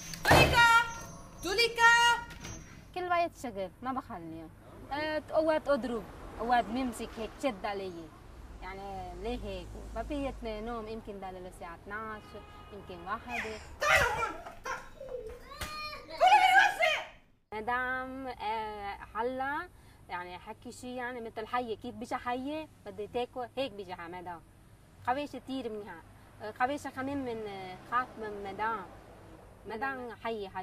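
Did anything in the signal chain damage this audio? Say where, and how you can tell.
No, nothing in the signal chain damaged this audio.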